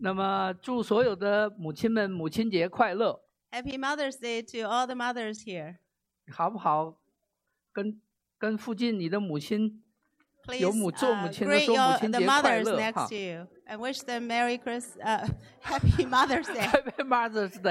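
No dropouts, distortion, level jumps or timing errors turn up anywhere in the recording.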